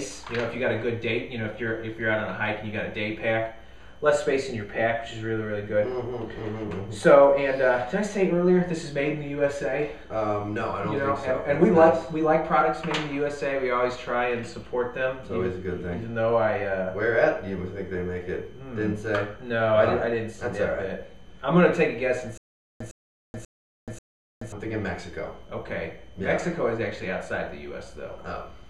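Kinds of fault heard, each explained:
stutter with silent gaps: the stream likely stalled, replaying its last fragment at each retry; a 108 ms burst returns four times with 429 ms of digital silence between.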